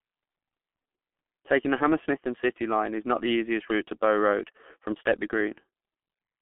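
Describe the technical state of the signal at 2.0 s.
At 2.0 s the speech sounds muffled and hoarse, with smeared consonants and nothing above 3.5 kHz. This is G.723.1 codec damage, present throughout: heavy low-rate coding, consistent with about 6.3 kbit/s, squeezed into a 200 Hz to 3.4 kHz telephone band.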